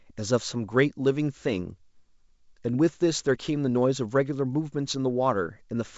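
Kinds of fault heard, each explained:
No faults heard: the speech carries the expected band limit of G.722 wideband telephone coding at 64 kbit/s, with nothing above 7.7 kHz.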